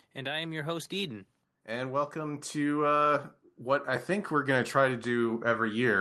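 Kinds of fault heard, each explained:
Automatic gain rising: The gain control judged the input too quiet and kept raising it. From 0.15 s to 5.86 s the level climbs by about 11 dB. Speech and background swell together, slowly, across nearly the whole clip.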